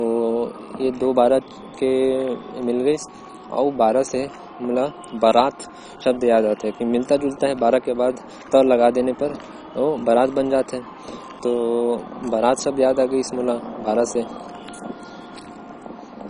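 Throughout, the speech sounds dull and gurgling, likely heavy MP2 compression. Nothing survives above 10.4 kHz, and upper bands flicker on and off, unlike a steady low-pass filter.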